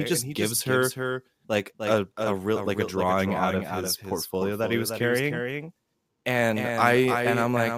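A doubled audio track runs throughout the speech: a second, full-band copy trails the original by roughly 300 ms at a few decibels lower, with no decay or room colour. This likely comes from the signal being captured twice, once through a slower path.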